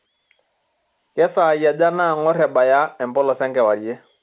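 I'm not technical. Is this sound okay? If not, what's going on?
Yes, nothing's wrong here; it's just speech carried over an ordinary telephone line, which is why it has that familiar narrow phone sound.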